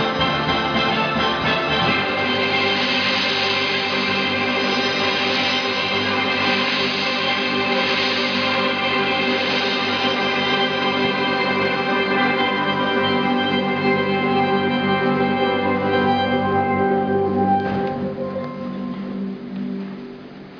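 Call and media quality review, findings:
Nothing stood out on listening, and there is no finding to raise for this clip.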